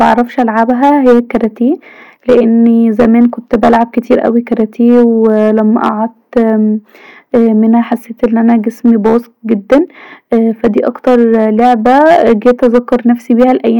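Hard clipping runs through the whole of this speech recording. The signal was driven about 9 dB past what one stage could pass, so the louder peaks, a small share of the samples, roughly one in twenty-five, were sliced off flat. On the peaks this gives a gritty crackle and a harsh edge. A waveform view shows squared-off plateaus, while a spectrogram shows vertical smears of harmonic energy reaching high into the kilohertz range at every peak.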